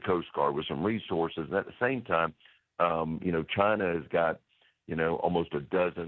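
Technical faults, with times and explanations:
No technical faults can be heard anywhere in this audio.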